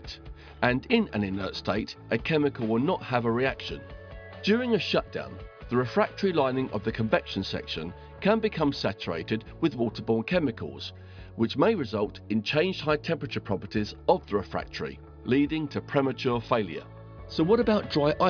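No technical fault is audible anywhere in the recording.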